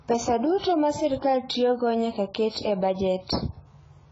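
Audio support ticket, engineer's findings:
Dull, smeared speech throughout, nothing above 7.7 kHz, heavy warbly swirl on sustained sounds and sibilants. Likely AAC compression, AAC-LC, sounds like roughly 16 kbps. Encoder dropped the top band and starved the rest.

Pre-echo, short hiss ahead of sharp attacks at 0.58–0.63 s (42 ms) and 2.49–2.55 s (58 ms). Transform codec spreading quantisation noise across the whole block, so noise sized for the loud onset leaks into the quiet gap before it.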